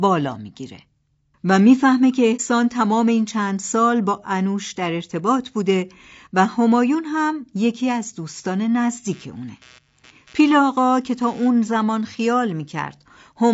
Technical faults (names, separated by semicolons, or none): low-delay AAC compression; AAC frame loss with muting; computer activity noise